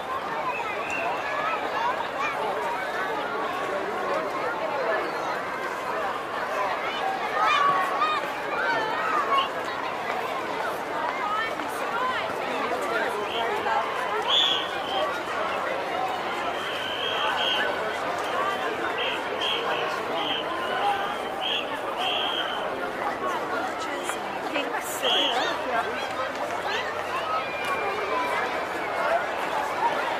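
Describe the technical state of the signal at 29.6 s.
At 29.6 s the signal is intact, with no dropout, distortion or other technical fault audible.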